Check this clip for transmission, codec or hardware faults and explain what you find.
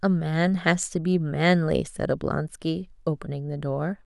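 No faults turn up on listening to this speech. There is nothing here to report or explain.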